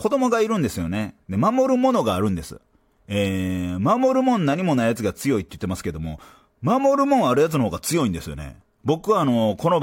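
Speech recording with no audible technical faults.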